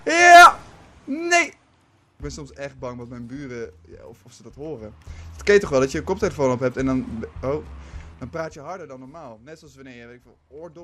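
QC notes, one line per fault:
1.26–2.66 s, 4.52–5.24 s and 8.06–8.78 s: zipper noise. The level moves in bare 2 dB jumps with no smoothing, and each jump clicks. It's a slow tick on the first drop of about 10 dB, faster on the rise of about 10 dB, and a quick zip on the final drop of about 20 dB.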